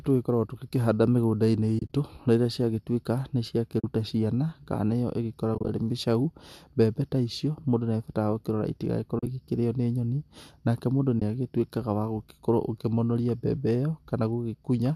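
AAC frame loss with muting drops the speech into soft-faded silences at 1.79–1.93 s, 3.80–3.84 s, 5.55–5.69 s, 9.19–9.27 s and 11.20 s. Lost frames were zeroed, leaving smooth-edged blank gaps in the spectrogram and waveform.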